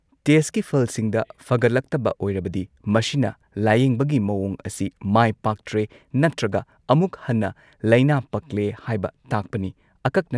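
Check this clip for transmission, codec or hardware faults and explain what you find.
No transmission, codec or hardware faults are audible here.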